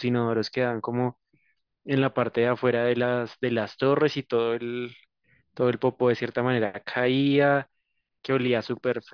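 No technical faults are audible anywhere in the recording.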